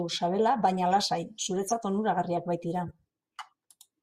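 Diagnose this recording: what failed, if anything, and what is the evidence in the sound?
Corrupt frame decoded at 1.68–1.73 s and 2.86–2.92 s, the first burst louder: codec-stage bit errors in a couple of frames each, decoded anyway, spraying misplaced energy into the speech.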